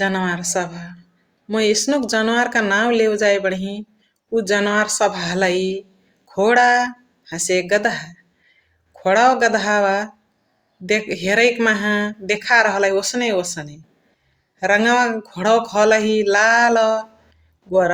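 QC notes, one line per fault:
No technical faults can be heard anywhere in the recording, and the signal stays stable and consistent throughout.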